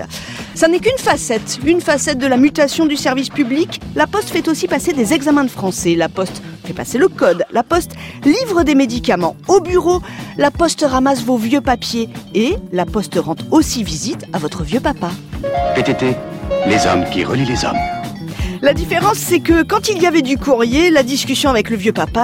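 No technical faults can be heard anywhere in the clip, so there is nothing to describe in time order.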